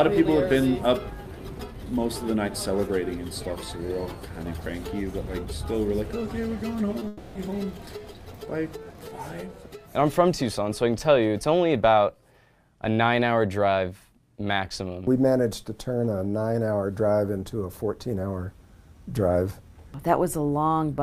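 At about 6.99 to 7.03 s there's a short concealed packet loss. Around 20 ms of audio didn't reach the decoder in time, so the receiver patched the gap by carrying on the last bit of sound and then blending back into the real signal. You hear it as a quick smear or wobble.

Right after, from about 7.07 to 7.37 s, the sound turns into a smooth synthetic continuation, a buzzy or hissy stretch that holds for roughly 280 ms and then gives way to the real audio again, with no pure silence in between. That's likely a long network dropout, where nothing arrived for that whole window and the receiver filled it by extending the last sound. Whatever was really there in those three-tenths of a second is gone.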